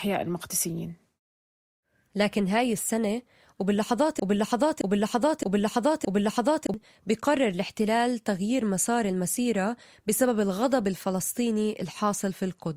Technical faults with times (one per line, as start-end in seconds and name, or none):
4.20-6.74 broken-record loop